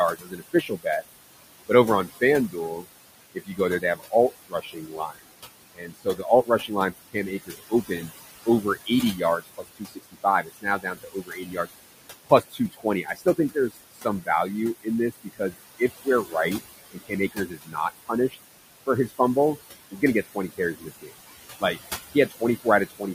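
Speech over room noise that sits about 12 dB below the voice, with noise suppressor artifacts throughout. The background is pushed down by about 18 dB between phrases and swells back under speech. Speech cut by the noise suppressor occurs at 0.15–1.03 s, 1.69–11.68 s, 12.25–14.29 s, 14.83–16.35 s, 16.92–19.2 s and 19.91–23.03 s. Within these spans, soft consonants and word endings fall by about 20 to 22 dB, amounting to a few seconds in total.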